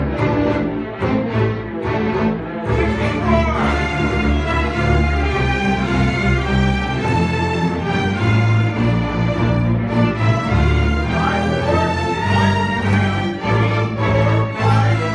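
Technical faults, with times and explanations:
Nothing stood out on listening; no technical fault could be heard anywhere in the clip.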